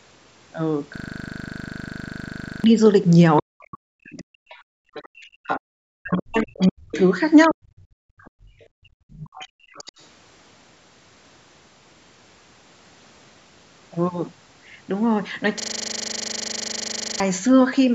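From 0.96 to 2.64 s there is a system hang loop. One 40 ms piece repeats 42 times at 25 Hz, giving a rapid, buzzing stutter. The system froze while the hardware kept replaying its buffer. Roughly 1.5 s of audio is lost.

From 3.4 to 6.95 s the speech is suppressed in double talk. It dips by up to about 40 dB, for roughly 3 s in total. This is likely the echo canceller turning both sides down at once.

Over this stretch the other side's voice leaks through, from 4.18 to 5.26 s at about 25 dB below the speech and from 6.15 to 7.53 s at about 15 dB below. The cause is likely echo that the canceller failed to remove.

At 7.48 to 7.65 s the speech is suppressed in double talk again, briefly dropping by about 40 dB.

From 7.93 to 9.7 s the background is gated by the echo canceller. The room sound drops by up to about 34 dB, for roughly 1 s in total, and comes back when the canceller releases. 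The other side's voice leaks through again from 8.19 to 10.03 s, at about 25 dB below the speech.

From 15.6 to 17.2 s the system hang loop returns. A 40 ms piece repeats 40 times at 25 Hz, and roughly 1.5 s of audio is lost.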